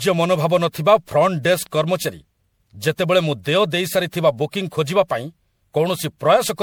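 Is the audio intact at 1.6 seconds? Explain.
No. A loud pop, actually two in quick succession, hits from 1.54 to 1.68 s, peaking about 5 dB above the speech, likely from a sudden voltage pulse such as a plug, switch or static discharge. The speech continues underneath. That moment also carries generation loss, likely from roughly seven rounds of MP3 re-encoding at 96 kbit/s, leaving the speech swirly, hollow and blurred at its attacks.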